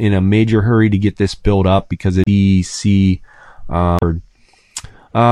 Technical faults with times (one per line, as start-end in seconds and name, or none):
2.24-2.28 damaged data in a compressed stream
3.99-4.03 damaged data in a compressed stream